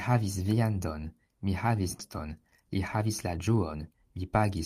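At 1.99 to 2.01 s, right after "havis viandon mi havis", there is a skip ahead. Later speech was already queued, and the receiver discarded a stretch of audio in transit or when the jitter buffer overflowed, rather than playing it late. Nothing fills the gap, so roughly 0.4 s of speech is simply gone. The two sides are butted together, and the speech lurches forward with an abrupt join and no pause.

From 2.76 to 3.92 s comes a jitter buffer speed-up. Audio that had piled up in the buffer was more than the receiver wanted to hold. To bring the delay back down, it repeatedly cut out short slices the length of one or a few pitch periods, about a tenth of a second in total. The speech plays at about 108% of normal rate with the pitch unchanged, so this stretch sounds slightly rushed.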